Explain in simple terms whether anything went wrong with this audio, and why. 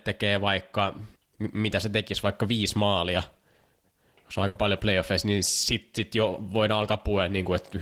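Around 4.47 to 4.58 s there is a burst of packet loss. Several chunks of the speech signal never arrived in time, so the receiver stretched the last sound into a fading buzz or hiss for about 80 ms. Then the speech jumps ahead, skipping roughly 80 ms. That skip and the held, fading sound set it apart from a plain click or a silent dropout.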